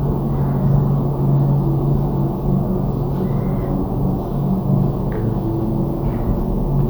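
No technical faults are audible.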